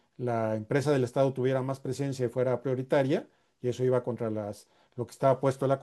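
No technical faults can be heard anywhere in the speech. Nothing in the recording or playback chain breaks in at any point.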